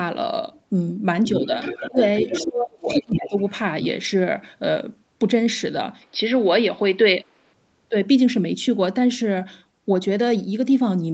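From 1.26 to 2.0 s there's a second voice underneath, about 10 dB down: the other side's voice leaking through, likely loudspeaker echo the canceller didn't fully remove. It comes back at 2.16–2.45 s (about 5 dB down), 2.88–3.19 s (roughly as loud as the talker) and faintly at 3.36–3.51 s (about 30 dB down).

Overlapping that, the talker gets pushed down: speech suppressed in double talk, likely the canceller ducking everything when both sides talk at once. There's a short dip of about 25 dB at 1.89–1.98 s, then a deeper one, about 30 dB, across 2.41–3.36 s.

At 6.02 s the tone goes dull, and a faint new noise floor sits about 40 dB down. The level stays the same, with no gap at the switch. That's the input switched to a poorer device, likely a different mic. It clears at 7.53 s.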